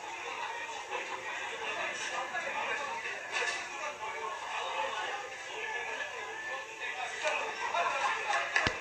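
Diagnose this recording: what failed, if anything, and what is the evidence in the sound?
The fault sits at the codec stage and runs through the whole clip: the sound has the hissy, grainy texture of Vorbis compression at a low quality setting, with tones roughened and attacks smeared. Nothing is present above 14.2 kHz, and the plainly audible damage fits a bitrate around 34 kbps. A spectrogram would show a hard ceiling at 14.2 kHz and mottled, noise-like patches in the upper bands, where fine detail was likely quantised into noise of similar energy.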